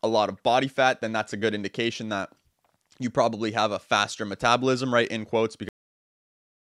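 A speech recording with a cut-off end: at 5.69 s the audio stops abruptly in the middle of a sound and drops straight to digital silence, which lasts about 1.1 s to the end of the file. There is no natural decay or room tail before the silence, so the ending is an interruption, not a pause. The final buffers of audio were never written to the file or played out, most plausibly because the capture or export was stopped before it had finished flushing its data.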